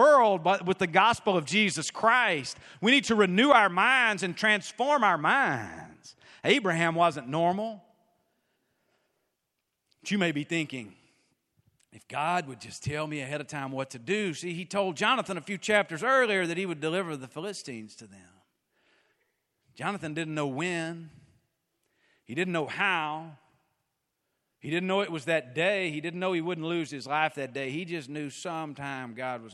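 Nothing in the recording stands out as a technical fault, so there's no problem here to point to or explain.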